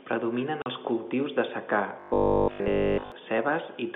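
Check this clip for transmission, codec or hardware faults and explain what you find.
Two faults stand out, a short dropout and a longer stretch of robotic buzz, both riding on a G.711 A-law telephone line whose narrow 200 Hz to 3.5 kHz band you can hear throughout.

From 0.62 to 0.66 s, just before "els cultius de secà", there's packet loss filled with silence: a 40 ms hole, which fits two 20 ms packets going missing. The receiver had nothing to play for that gap, so it inserted digital silence. The audio is cut off abruptly rather than faded, and the result sounds like a quick chop in the speech.

From 2.00 to 3.12 s, right after "els cultius de secà", the voice turns into robotic sound from repeated short buffers. There's a rigid, metallic buzz at 50 Hz that still loosely follows the speech. The likely cause is audio arriving too slowly, so the playback side kept looping the last chunk of roughly 20 ms, which matches the 50 Hz buzz. 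Essentially the whole stretch is made of those repeats, and the fresh audio in between was skipped.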